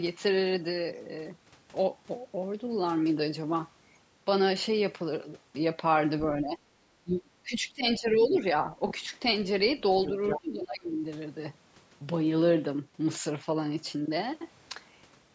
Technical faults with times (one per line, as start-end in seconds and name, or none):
6.38-6.60 speech suppressed in double talk
7.04-8.40 speech suppressed in double talk
8.09-8.38 other side's voice leaking through
10.04-10.41 other side's voice leaking through
10.39-11.05 speech suppressed in double talk